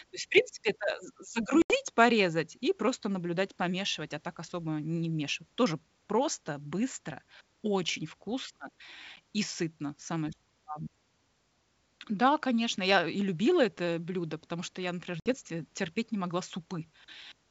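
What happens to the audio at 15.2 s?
Packet loss on an ADPCM call, 15.2 to 15.35 s: 60 ms drops to hard-edged silence. Unlike a plain dropout, speech resumes distorted while the decoder's predictor resynchronises.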